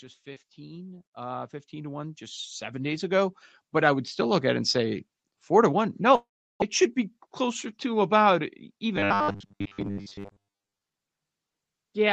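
From 0.23 to 4.5 s, automatic gain rising lifts the level by about 17 dB. The control judged the input too quiet and raised its gain step by step. Speech and background swell together, slowly, across several seconds.

At 6.15 s the sound breaks off. The last fragment is stretched into a fading buzz, then nearly 0.35 s of silence follows. Speech returns at 6.64 s, with about 0.4 s gone for good. This is likely a long network dropout.

From 7.20 to 7.87 s comes a jitter buffer speed-up. The buffer held too much audio, so tiny pitch-period slices were cut out repeatedly. About 50 ms is removed. Speech runs at 106% speed, slightly hurried, with unchanged pitch.

From 8.96 to 10.81 s the speech turns robotic. A rigid, metallic buzz at 100 Hz sits over it, though the rough shape of the words survives. Most of this stretch is repeated material. The likely cause is repeated short buffers, and the 100 Hz buzz fits 10 ms chunks played again and again. 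Throughout, the Opus call path limits the sound to 8 kHz.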